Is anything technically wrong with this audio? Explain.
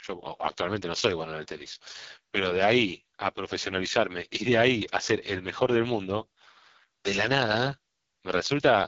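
Yes. Throughout the recording, the speech carries the sound of the AMR wideband (HD Voice) codec at a very low rate. Nothing is present above about 7.3 kHz. The top band sounds like filled-in noise rather than real detail, because the codec fills 6.4 to 7 kHz with shaped noise, while speech below that is rebuilt from a vocal tract model driven by sparse pulses. The damage is heavy: voiced sounds come out rough and raspy, with a buzzy, grainy texture. That fits the lowest AMR-WB mode, around 6.6 kbit/s.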